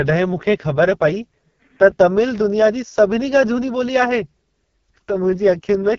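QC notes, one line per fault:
Throughout: AMR wideband (HD Voice) codec at very low rate; speech sounds rough and raspy, consistent with about 6.6 kbit/s. Spectrogram shows nothing above 6.9 kHz, with noise-filled top band.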